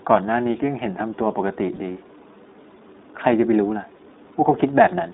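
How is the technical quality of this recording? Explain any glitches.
The technical quality is limited by narrowband codec coding throughout, with two brief dropouts.

The iLBC codec is plainly audible across the whole clip. The speech sits in a telephone band of roughly 200 Hz to 3.7 kHz, so it sounds boxy, with no air or sibilant detail above it. iLBC codes each short frame's excitation on its own, which leaves a slightly rough, synthetic edge on the voice. The sound fits the 15.2 kbps mode with 20 ms frames.

Lost iLBC frames occur at 1.76 to 1.79 s and again at 3.98 to 4.01 s, each about 20 ms long, which fits a single missing frame each time. In both gaps the decoder fills in by repeating the last pitch cycle blended with noise, heard as a tiny held, faintly buzzy blip. Because each iLBC frame decodes independently, the voice snaps back to normal immediately afterwards.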